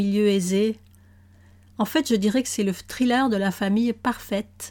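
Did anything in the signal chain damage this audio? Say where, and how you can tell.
No, nothing in the signal chain audibly damaged this speech recording: levels, timing and continuity hold steady throughout, with no stage leaving an audible mark.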